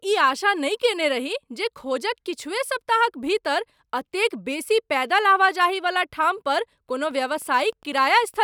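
From 7.02 s to the end, Wi-Fi interference adds faint ticking every 102.4 ms, roughly 40 dB down, seen as evenly spaced vertical spectrogram lines.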